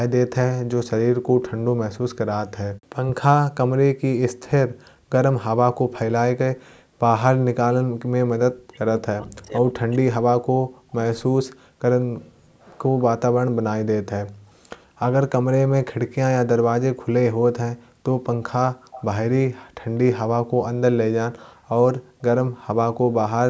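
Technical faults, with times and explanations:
8.39–11.72 s, speech suppressed in double talk: The voice dips and breaks up, falling by about 40 dB at its deepest, for roughly three seconds in total. Both sides were likely talking at once, so the echo canceller turned down the near talker too.
12.01–12.05 s, 18.23–18.29 s, 18.92–19.05 s, 19.72–19.98 s, echo leak: Brief, faint copies of the voice return 204 ms late, about 20 to 40 dB below the speech. A loudspeaker's sound likely slipped past the far end's echo canceller and was sent back.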